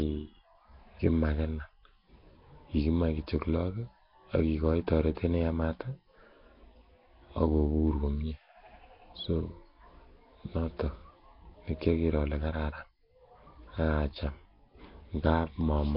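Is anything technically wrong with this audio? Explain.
Yes. Throughout the speech there is a rough, hissy halo and a smeared, underwater quality, likely from Nellymoser compression at a rate around 22 kbps. Starved bands are refilled with noise, and nothing survives above 5.3 kHz. A spectrogram shows a hard ceiling there, with speckled, blurred harmonics below it.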